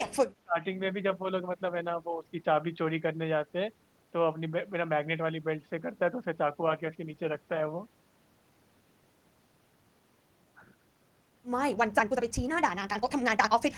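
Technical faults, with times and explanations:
0.00 to 0.11 s and 0.35 to 0.57 s, speech suppressed in double talk. The voice drops sharply in two short bursts, by roughly 30 dB in the first and roughly 35 dB in the second. Together they cover only a few tenths of a second. The likely cause is an echo canceller facing both sides talking at once. Unable to separate the near talker from the loudspeaker echo, it pulled down everything, so the speech dips and thins.
11.66 to 13.78 s, time-stretched section. From 11.66 s to the end, the pace suddenly jumps to about 1.84 times normal speed. The pitch does not rise with it. This likely comes from processing that squeezed the audio to fit a shorter length, dropping short slices to keep pitch steady. Those removed pieces leave the speech rushed.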